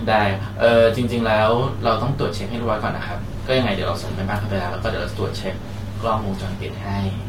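Sample clock jitter runs through the whole speech clip: the converter clock wobbles by around a microsecond, adding a faint hiss that rises on loud, bright sounds, roughly 45 dB down.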